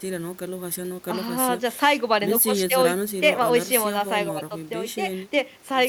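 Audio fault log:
No audible faults are present in the speech at any point.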